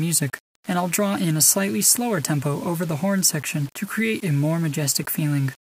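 From the very start and right through to the end, there's a grainy, gritty distortion that moves with the sound, which is classic low bit depth without dither. It's likely the audio was rounded down to about 7 bits with no dither. The error tracks the signal, sitting roughly 25 dB below it, so quieter passages get rougher and the faintest bits crumble or sputter between steps instead of fading smoothly.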